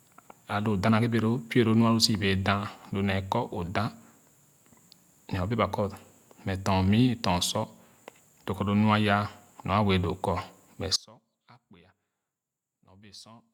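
At 10.96 s the signal path most likely lost its wanted source while the stages after the break stayed live, an audio dropout to a faint residue. The speech cuts out abruptly mid-flow rather than pausing or fading, and for the rest of the clip all that remains is a faint leak of the sound, roughly 25 dB below its normal level. Nothing of the full-level signal returns before the end.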